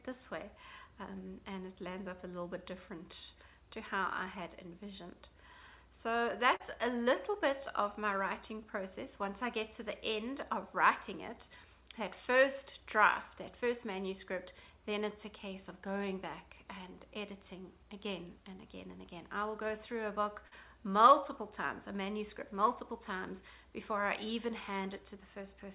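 At 6.56 s and again at 20.48 s there is a brief smear lasting a few hundredths of a second, where the sound wobbles before rejoining. This is short concealed packet loss: about 40 ms never arrived in time, so the receiver extended the preceding sound to cover it. All of this sits within the call's narrow band, with nothing above 4 kHz.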